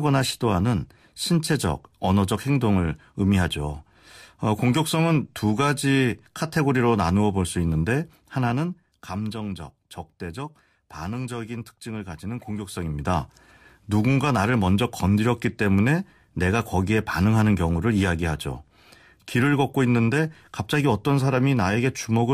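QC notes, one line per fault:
No faults found.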